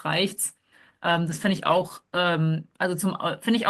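From 1.06 s to about 2.25 s there's a call bitrate drop. The encoder got squeezed, which sounds like a fall from around 32 to roughly 14 kbps. For about 1.1 s the speech turns coarse and muffled, the highs trimmed away, before quality recovers.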